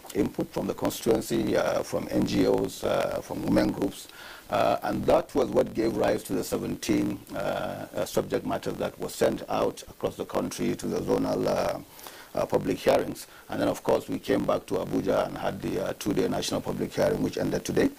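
From start to finish, a block size mismatch (truncated) is present. One stage hands over longer blocks than the next stage takes in, so the tail of every block is discarded. The repeating cut produces a steady buzz at about 46.9 Hz, which fits a 1024-sample read. Because material is dropped from each block, the audio runs about 1.12 times faster than it should while staying at roughly its normal pitch.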